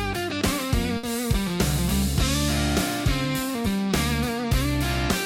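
At 0.97 s a burst of packet loss sets in and lasts until about 1.06 s. Several consecutive packets never arrived in time, so the receiver stretched the last sound it had across roughly 60 ms, fading it as the gap went on. Playback then resumes about 60 ms further on, with that stretch lost. A plain dropout would fall to silence, and a single lost packet would be too short to hear as a held sound.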